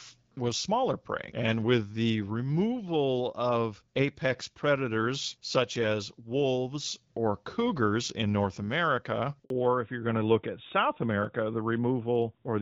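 At 9.44 s a handover gap cuts the speech for 60 ms as the call switches networks. It is a clean, brief silence with no stutter or repeated sound, unlike packet-loss concealment. From 9.50 s to the end, a fallback to narrowband removes everything above 4 kHz. The earlier HD Voice sound, which fits AMR-WB at around 12.65 kbit/s, turns dull and boxy. This is a sustained bandwidth step at the handover, not a momentary muffle.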